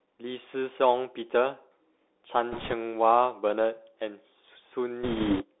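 Bluetooth CVSD headset codec, present for the whole speech clip: the sound is confined to a narrow telephone band of roughly 300 Hz to 3.6 kHz, which fits a 64 kbps one-bit-per-sample link. Each bit only nudges the waveform up or down by an adapting step, so fast, loud high content outruns the step and smears. Sibilants come out scratchy, and a granular hiss sits beneath the speech throughout, plainly audible.

Bit errors on a Bluetooth voice link appear from 2.52 to 2.73 s and again from 5.03 to 5.44 s. Flipped bits on the headset link corrupt the step decisions. Because each bit carries only a small weight and the error fades quickly, there are no sharp clicks, just a rushing, crackly noise over the speech. The first burst, at an error rate of a few percent, is lighter. The second, nearer 5 percent and longer, crackles more heavily.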